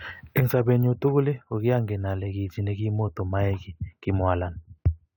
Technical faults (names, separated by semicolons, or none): none